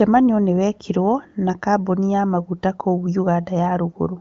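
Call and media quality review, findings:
Nothing to flag on this one: the speech comes through the AMR wideband (HD Voice) path as you'd expect, topping out near 7.2 kHz, and no faults turned up in review.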